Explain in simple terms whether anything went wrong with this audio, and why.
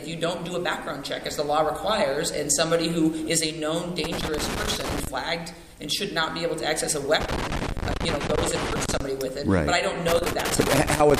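Loose connector crackle appears from 4.04 to 5.07 s, 7.21 to 9.00 s, and 10.08 s to the end: a worn contact flickering on and off, chopping the sound into scratchy bursts.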